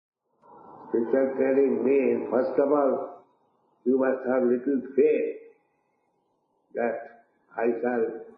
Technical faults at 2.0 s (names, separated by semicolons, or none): noise suppressor applied to music or sounds